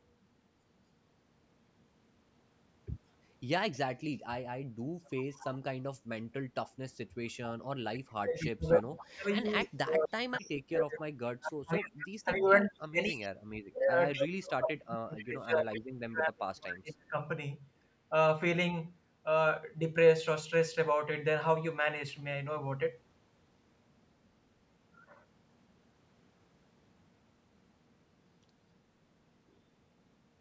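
At 5.04 to 5.59 s an echo leak appears. A faint copy of the speech returns about 0.25 s late, roughly 25 dB below the talker. One side likely plays the call on a loudspeaker, and its echo canceller misses part of it. Inside that span, from 5.09 to 5.32 s, the talker dips sharply, by up to about 30 dB. This is speech suppressed in double talk. The canceller likely hears both sides at once and turns everything down.

The echo returns more strongly at 7.94 to 9.04 s, only about 10 dB below the speech. It again trails by about 0.25 s. Shorter scraps follow at 9.60 to 9.66 s, 11.99 to 12.08 s and 14.13 to 14.19 s, at about 30, 15 and 25 dB down. From 8.05 to 17.17 s the suppression returns in pieces, about 7 s in total. The talker drops by up to about 35 dB, fading and cutting out as the other side speaks.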